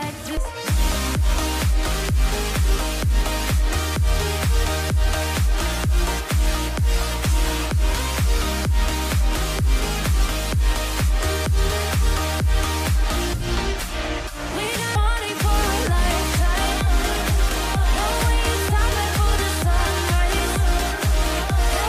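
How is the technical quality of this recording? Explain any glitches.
Two glitches stand out, at 0.37 s and 14.95 s. Each is a sudden jump, as if about a third of a second of sound vanished. The likely cause is a dropped buffer (overrun): hardware overwrote samples before collection, splicing the surrounding audio directly.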